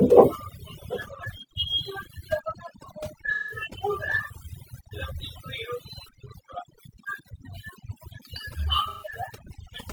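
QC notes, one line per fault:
Throughout: overdone noise removal. A noise reduction stage set far too aggressively is pulling individual frequency bands down, or out entirely, whenever they sit close to its noise estimate, and the quieter parts of the speech fall under that threshold along with the noise. The background collapses to near silence dotted with twinkling, chirpy specks, while the voice has its softer detail stripped away.
3.34 to 3.64 s and 8.89 to 9.11 s: AAC frame loss with concealment. The decoder lost stretches of the stream and patched the gaps by reusing the last good spectrum with scrambled or interpolated content. The first gap covers about 171 ms, which fits four lost frames. The second covers 128 ms, which fits three. Each shows up as a brief smeared, noisy, phasey patch where the speech loses its clarity before the normal signal resumes.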